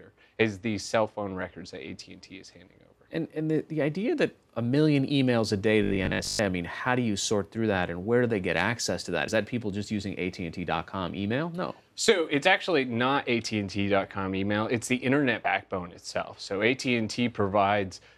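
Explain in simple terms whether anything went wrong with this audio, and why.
Two things went wrong. From 5.83 to 6.39 s, new audio likely arrived too slowly, so the player kept replaying the same tiny 20 ms chunk, for about half of that stretch. This produces robotic sound from repeated short buffers: a stiff, metallic 50 Hz buzz that follows the natural sound only roughly.

At 9.28 s and again at 15.44 s, compressed frames were skipped. Pieces of the packed audio never got played, so the sound jumps ahead by roughly 50 ms, which fits two missing 26.1 ms frames.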